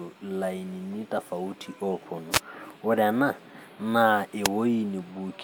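At 2.31 to 2.40 s, and again at 4.43 to 4.48 s, the speech is interrupted by a wireless microphone noise hit: a brief swish of static lasting about 90 ms and then about 50 ms. The FM radio link from the microphone faded as reflected signals cancelled, letting receiver hiss rise over the speech. On a spectrogram each hit is a narrow vertical band of broadband noise; the waveform shows a short, ragged, noise-filled patch.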